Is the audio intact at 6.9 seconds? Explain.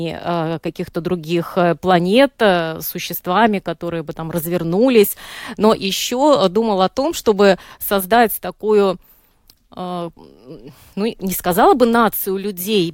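Yes, the audio is intact at 6.9 seconds, with no fault audible at that moment.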